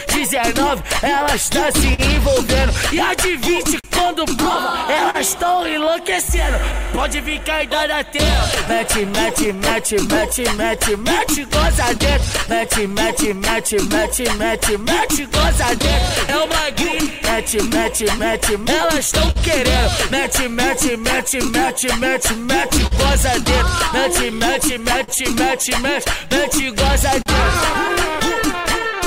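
The sound carries clock drift between sender and receiver throughout. The sender's clock runs slow, by roughly 3 percent. The receiver's buffer keeps draining, so it must stretch the audio to keep playing. Faint timing hiccups recur at uneven intervals across the clip.

Repeated timing corrections run from 0.06 to 28.17 s. The receiver repeats short pieces again and again, always in the same direction. Playback runs at about 99 percent speed. Around 0.4 s is added in total.

Scattered short gaps appear from 0.36 to 25.1 s. Around forty small holes occur there, the longest near 40 ms. Each is patched by continuing the last sound, about half a second in all. Three more follow between 27.22 and 28.82 s. They cause brief ticks and smears.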